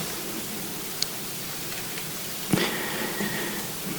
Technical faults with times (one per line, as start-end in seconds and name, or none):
none